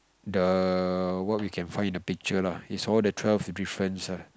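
No technical faults are audible anywhere in the speech.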